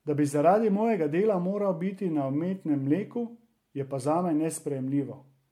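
Throughout the speech there is a swirly, hollow quality, with consonant onsets smeared. The band runs up to about 19.9 kHz, so the damage is not simple low-pass filtering. It points to generation loss, likely from around seven successive MP3 passes at a rate that fits 96 kbit/s. Each re-encode requantises on a shifted frame grid, so the noise and spectral holes accumulate.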